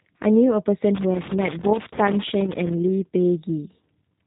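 A speech recording passed through the G.729 codec for its whole length, with damage that is plainly audible. The codec rebuilds each 10 ms frame from a vocal tract filter, a pitch predictor and a few pulses, so the sound is rough and synthetic, which fits a low-rate 8 kbit/s VoIP link. On a spectrogram, energy stops at a flat ceiling near 3.8 kHz, with nothing above it and a smeared, slightly stepped texture below. From 0.95 s to 2.73 s there is loose connector crackle: a worn or dirty contact breaking and remaking while moved, chopping the signal into an irregular scratching burst. In the waveform this shows as sudden dropouts and sharp spikes scattered unevenly across that stretch. On the spectrogram it appears as thin vertical broadband streaks that reach the codec's top edge.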